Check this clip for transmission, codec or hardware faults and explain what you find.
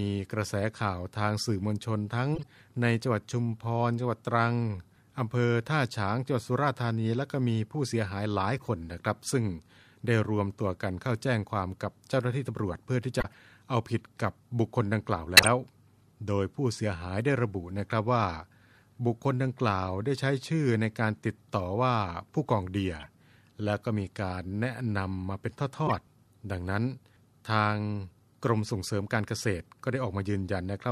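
Six short bursts of corrupt frame decoded damage are audible in the speech as brief chirps, squeaks and blips of noise. They fall at 2.35–2.53 s, 8.58–8.67 s, 13.20–13.34 s, 15.37–15.48 s, 23.00–23.06 s and 25.87–25.95 s. The ones at 13.2 s and 15.4 s are loudest, peaking around -10 dBFS, and the one at 8.6 s is faint. Each burst comes from bits flipped inside compressed frames that the decoder played anyway. The misread gains and codes put energy at the wrong frequencies, and the burst lasts about as long as the handful of damaged frames.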